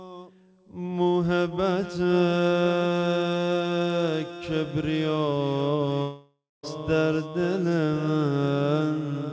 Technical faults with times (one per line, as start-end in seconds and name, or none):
6.02-6.65 long network dropout